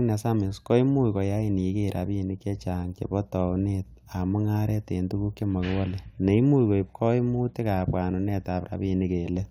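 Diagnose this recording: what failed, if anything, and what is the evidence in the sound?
Nothing in this speech recording points to a failure at any stage, so there's really nothing here to diagnose.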